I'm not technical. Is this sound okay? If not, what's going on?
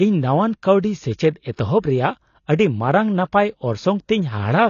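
No, the speech sounds dull and smeared throughout, with a warbly, fizzy edge on hissy sounds, likely from AAC compression. Nothing is heard above 6.9 kHz. Simple muffling wouldn't cause that swirling texture.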